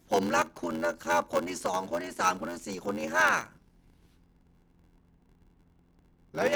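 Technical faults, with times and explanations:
Throughout: block size mismatch (padded). Zero-filled gaps ending each block, fitting 512-sample reads, cause an 86.1 Hz buzz and 0.861x speed with the timbre kept. The waveform shows regular dropouts, and the spectrogram shows evenly spaced vertical stripes.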